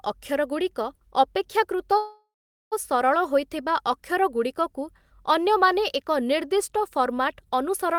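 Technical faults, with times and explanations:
1.97 to 2.74 s, call audio freeze: the speech stops and the last sound is stretched into a fading buzz or hiss that drops to silence for roughly 430 ms, then the talker resumes exactly where they left off, so nothing is lost but everything after arrives about 743 ms late. This is likely a network stall that emptied the jitter buffer, with the receiver filling the wait until the delayed packets turned up.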